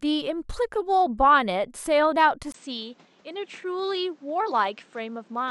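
Speech where, from 2.52 s, after a 20 ms gap, the sound dulls to nothing above 8.5 kHz, drops a few dB and gains fresh background noise. That is likely an input switched to a poorer device, not a filter, since the noise also changes.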